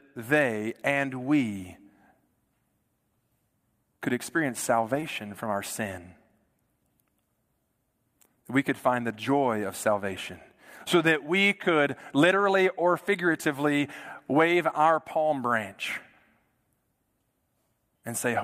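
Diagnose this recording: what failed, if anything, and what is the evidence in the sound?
A short concealed packet loss failed at the network stage, and the decoder hid it. Between "could experience" and "from our sin", at 5.00 to 5.04 s, the speech briefly smears. About 20 ms of audio never arrived in time. The receiver filled roughly 19 ms of it by extending the last sound, pitched if voiced and shaped noise if not. It then blended back into the real signal, leaving a short blur in place of a gap.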